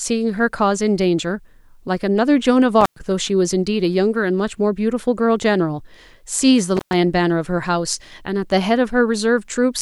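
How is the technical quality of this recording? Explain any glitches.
The recording has two dropouts from an intermittent contact, at 2.81 to 3.00 s and 6.77 to 6.93 s. A loose cable or plug briefly lost connection, breaking the signal path for about 107 ms and then about 119 ms. Each time, the speech cuts out abruptly with a crackle as the contact opens and again as it closes, and faint hiss fills the gap before the sound returns.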